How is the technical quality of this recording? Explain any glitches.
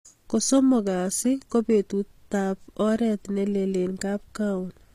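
Technical quality is compromised throughout by what is likely HE-AAC compression, fitting roughly 24 kbps: bright treble is rebuilt from copied lower bands, so s sounds turn gritty and metallic, with nothing above 15.5 kHz. Unlike plain low-bitrate muffling, the top stays present but sounds synthetic.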